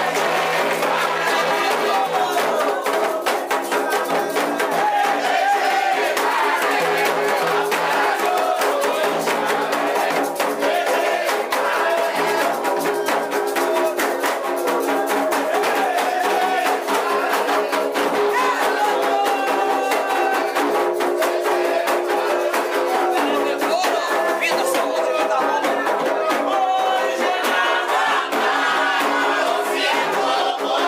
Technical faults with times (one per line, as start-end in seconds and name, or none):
none